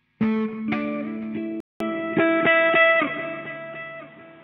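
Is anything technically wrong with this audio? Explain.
Yes. At 1.6 s, after a 200 ms gap, the input likely switched to a poorer device. From there the sound turns dull, cut off above 3.8 kHz, with a small level shift and fresh background noise. On a spectrogram the top band goes dark, and the waveform shows a flat gap.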